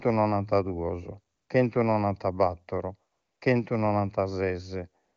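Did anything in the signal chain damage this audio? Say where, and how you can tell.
Yes. Three pauses swap their real background for a smooth, even hiss: 1.35 to 1.49 s, 3.11 to 3.41 s, and 5.03 s to the end. This is AMR comfort noise at the codec stage. The talker was judged silent, speech frames stopped, and the receiver synthesised noise from a coarse level-and-spectrum description.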